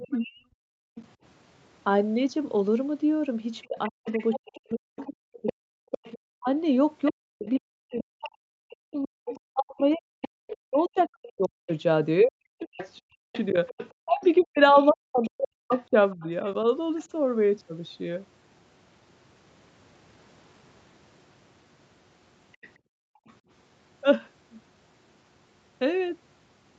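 A speech recording with echo-canceller trouble. Other side's voice leaking through appears from 0.0 to 1.06 s, 4.06 to 11.02 s, 12.77 to 17.02 s and 22.52 to 23.33 s. A second voice sits about 15 to 30 dB under the talker. The likely cause is loudspeaker playback that the canceller failed to remove from the microphone. Speech suppressed in double talk hits 0.16 to 0.61 s and 3.66 to 16.25 s. The talker's level plunges by roughly 40 dB in pieces, around seven seconds in total in the longer stretch. Both sides were likely talking at once, so the canceller turned everything down. Background gated by the echo canceller occurs from 0.89 to 0.95 s and 22.78 to 23.26 s. The room sound drops by about 40 dB, then returns when the canceller releases its hold on the microphone.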